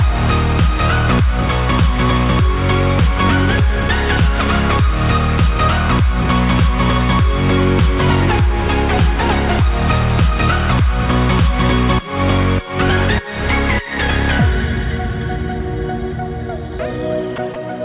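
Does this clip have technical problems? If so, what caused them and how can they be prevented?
Yes. Near the end of the clip, two brief gaps occur at 17.36–17.38 s and 17.54–17.56 s. In each, about 20 ms of audio is replaced by a flat, steady noise bed, and the original sound returns immediately afterward. This is likely sound dropped by the voice detector: the sender judged short passages to be background, stopped transmitting, and the receiver filled the gaps with comfort noise. The band-limited sound, with nothing above 4 kHz, points to a narrowband call codec. To prevent this, lower the detector's sensitivity threshold, add a hangover period, or disable discontinuous transmission for this path.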